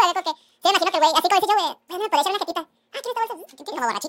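From start to finish the speech runs at twice its natural speed and sits a full octave high, about 12 semitones up, giving a chipmunk-like, hurried sound with pitch and tempo shifted together. This is a wrong sample rate fault: the samples are being played back at double the rate they were captured at, with no conversion. That fits audio recorded at around 22 kHz being played as if it were 44.1 kHz.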